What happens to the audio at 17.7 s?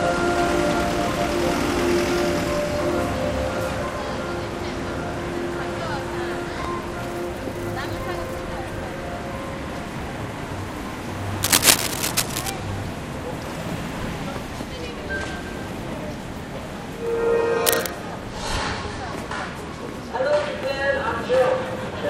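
A burst of cable scratch noise runs from 17.66 to 17.89 s. It is heard as a rough scratching, rustling layer about as loud as the audio itself. The likely cause is a worn cable or connector moving, so its contact resistance flickers rapidly.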